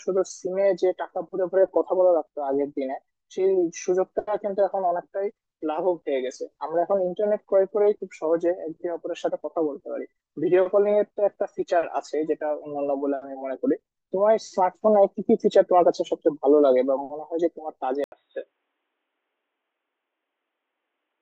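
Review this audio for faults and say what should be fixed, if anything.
At 18.04 s the speech cuts out for 80 ms, then returns duller, boxier and about 10 dB quieter until the end, with a faint new noise floor underneath. Nothing above 3.8 kHz survives, so the spectrogram shows a flat ceiling there, and the waveform shows a brief gap followed by a smaller envelope. This is likely an input switched to a poorer device. Lock the recording input so the system cannot change devices mid-session.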